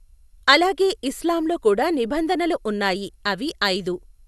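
Throughout, the speech sounds swirly, smeared and hollow, with blurred consonant attacks and nothing above 12.6 kHz. This generation loss likely comes from about seven passes of lossy coding, consistent with MP2 at 128 kbit/s, each adding its own noise.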